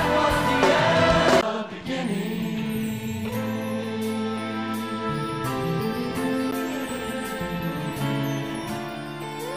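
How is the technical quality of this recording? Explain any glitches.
The recording has two CD skips, at 1.41 s and 6.51 s. Each time, the sound cuts out with a tick and a very short mute of roughly 10 to 15 ms. A knock or disc flaw sent the laser to another turn of the spiral, so playback resumes elsewhere.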